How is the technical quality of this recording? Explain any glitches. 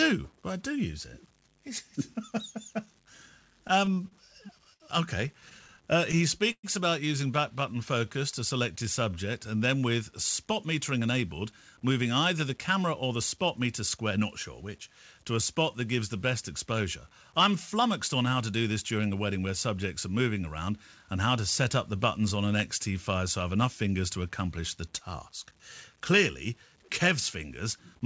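The recording has clear technical problems: a grainy texture throughout, plus stutters and timing shifts between about 4 and 15 s.

Low bit depth without dither runs throughout. Grainy distortion follows the speech, sitting about 35 dB below it. This likely comes from truncating to very few bits, perhaps 8.

Repeated stalls (stutter) occur from 3.68 to 4.83 s, with seven brief holds up to 65 ms. A second burst from 5.28 to 6.66 s, just before "about using back", has ten holds up to 118 ms. The jitter buffer ran dry, so the receiver stretched the last sound until data arrived. Nothing is lost, but the speech drags and catches.

A jitter buffer slow-down runs from 7.56 to 9.15 s, between "about using back" and "and then with spot". The receiver repeated pitch periods to rebuild its reserve, adding 114 ms. Speech plays at 93% speed with unchanged pitch.

Jitter buffer speed-up appears twice. 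The first runs from 10.99 to 14.18 s and removes roughly a fifth of a second. The second runs from 14.62 to 15.19 s, after "not sure" and before "to a spot that". The buffer held excess audio, so the receiver cut out short pitch-period pieces. Both stretches run at 107% speed with the same pitch and sound slightly hurried.

The band limit at 8 kHz fits a wideband call codec such as G.722.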